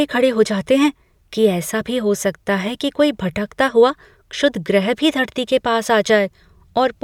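No technical faults can be heard anywhere in the recording. Nothing in the speech points to a problem at any stage of capture or playback.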